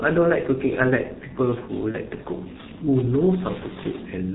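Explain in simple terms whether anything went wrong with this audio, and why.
Two things went wrong. Throughout the clip, the speech passes through the G.723.1 codec, an old internet-telephony format that squeezes audio into a very small data stream. It discards everything above about 4 kHz and tracks the voice in coarse 30 ms steps, so the speech sounds muffled and hoarse, and sharp consonants like s and t come out smeared. The damage here is heavy, so this dull, rough quality never lets up.

Between about 1.91 and 1.96 s, there is VoIP packet loss concealed by the speech codec. A short piece of data, about 30 ms, went missing, which fits one lost codec frame. The decoder filled the gap by guessing, stretching the last bit of voice it had received into a brief buzzy or hissy sound that fades. Because each frame builds on the one before, the voice stays weak or warped for a moment after the gap.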